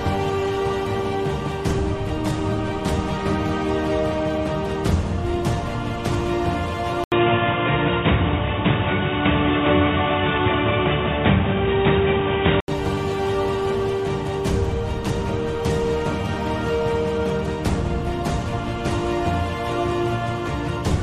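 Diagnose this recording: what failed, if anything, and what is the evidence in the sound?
From 7.04 s to 12.68 s the sound goes dull and boxy, with nothing above 3.8 kHz, a brief 80 ms gap at the switch, a level shift of a few dB and a new, faint noise floor. That's likely an input switched to a poorer device at the driver level, with the narrower capture path taking over until 12.68 s.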